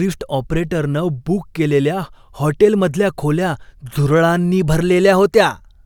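No technical faults can be heard anywhere in the recording; the signal stays steady and intact throughout.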